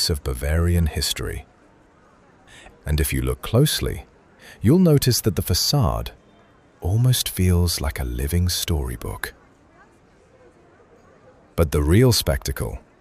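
From start to finish the audio carries crude rate conversion. Linear interpolation without filtering, consistent with a 32 kHz to 48 kHz change, leaves an inharmonic fizz around 20 dB under the signal that tracks loud, bright passages. Spectrograms show faint mirrored images above the true content.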